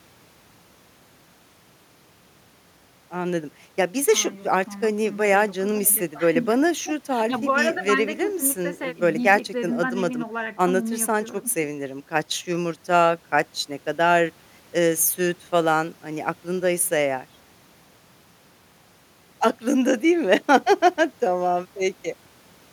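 No faults turn up anywhere in this speech recording, so there's nothing here to pin down or explain.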